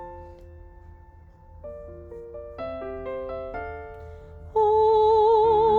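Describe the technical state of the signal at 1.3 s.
At 1.3 s the signal is intact, with no audible fault at that point.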